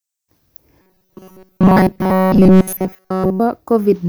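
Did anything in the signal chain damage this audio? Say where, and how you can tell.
Yes. From 0.82 to 3.40 s the speech turns into robotic sound from repeated short buffers: a stiff, metallic 188 Hz buzz that only loosely follows the words. This is likely a starved driver or buffer stage looping the last 5.3 ms of audio throughout.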